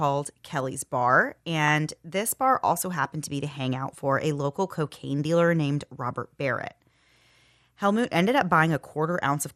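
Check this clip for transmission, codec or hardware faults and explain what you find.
The speech has two problems, one running the whole way through and one short burst.

MP2 compression is there throughout. It's dull and gurgly, with upper sub-bands dropping out, which fits a low rate around 80 kbps. That's the likely cause.

DAB burbling turns up from 1.68 to 1.72 s. Bit errors slipped past error correction, putting short blips of noise into single sub-bands, so you get a brief patch of burbling.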